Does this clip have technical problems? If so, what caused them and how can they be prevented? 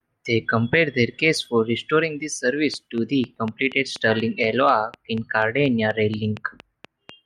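Yes. From 2.74 s to 7.10 s, just after "case for restoring the", a train of clicks runs over the speech: about twenty near-identical pulses at a regular 4.1 per second, peaking about 5 dB above the speech and audible in the pauses too. The steady spacing and uniform shape point to a likely repeating electrical disturbance from nearby equipment or an unstable audio interface. Prevent it by moving or isolating interfering devices and using a stable interface connection.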